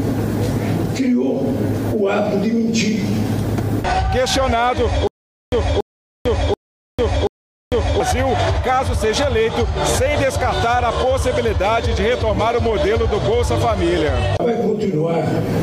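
From 5.07 s to 8.00 s there is a stutter with silent gaps. A 283 ms fragment repeats four times, each followed by about 449 ms of digital silence, giving a 732 ms period. This likely comes from a stalled player or stream replaying its last buffer at every retry. The intended audio is lost.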